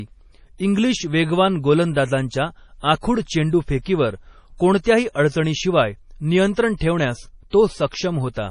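Heavy MP3 compression runs through the whole of this speech recording: the top end stops dead around 10.5 kHz, and the sibilants have that watery, swirly chirp you get when weak frequency lines flicker on and off between frames. The damage level fits a bitrate of around 32 kbps, and an MP3 encoder starved of bits is the likely culprit. There's also pre-echo at 3.82 to 3.86 s, 6.54 to 6.57 s and 6.76 to 6.81 s, where a short hiss of 27 to 51 ms leaks in ahead of sharp onsets. The codec smeared noise meant for the loud attack back into the quiet bit of the block just before it, so those onsets also come across softened.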